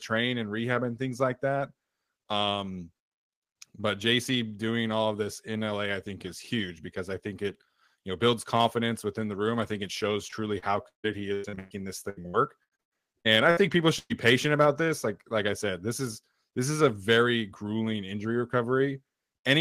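Repeated packet loss (robotic sound) runs from 10.27 to 13.59 s: one hole after another, the longest about 152 ms, is patched by stretching the preceding sound, so roughly a third of that span is concealed, about 1 s missing, and the speech turns choppy and robotic.

A burst of packet loss follows at 13.99 to 14.12 s. About 100 ms goes missing; the receiver carries the last sound forward and fades it, then about 40 ms of silence, before the speech resumes with that stretch gone.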